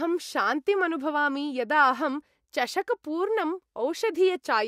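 Nothing here trips any alarms; I can't hear a single technical fault anywhere in this bit of speech.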